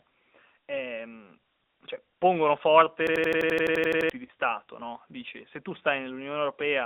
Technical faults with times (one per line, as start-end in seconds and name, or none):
0.00-6.85 AMR narrowband mobile codec
3.07-4.10 system hang loop
4.26-4.30 lost AMR speech frames